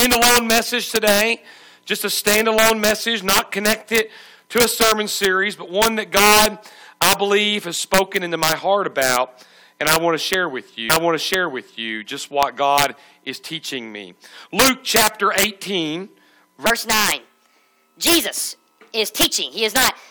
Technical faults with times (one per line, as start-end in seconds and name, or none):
0.00-20.10 integer overflow
10.89-11.89 stream segment repeated
16.66-20.10 section at the wrong speed